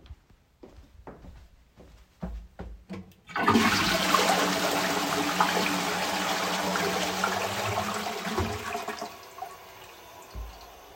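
No technical faults are audible in this recording.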